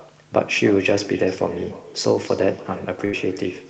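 Speech carrying an echo with no canceller from start to finish: a quieter copy of the talker, about 17 dB down, trails the original by roughly 300 ms. That is the far end's loudspeaker feeding its microphone back through the call, which gives every phrase a thin shadow. At 3.05–3.15 s a burst of packet loss occurs. The receiver stretches the last sound for about 76 ms while fading it, then playback jumps ahead, so roughly 80 ms of the speech is missing. The band-limiting near 8 kHz is consistent with a wideband Opus call path.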